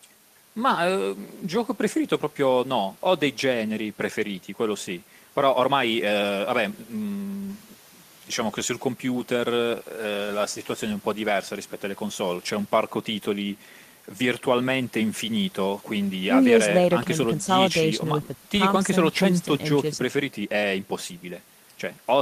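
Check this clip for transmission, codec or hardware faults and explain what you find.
No transmission, codec or hardware faults can be heard anywhere in the speech; the signal stays continuous and steady throughout.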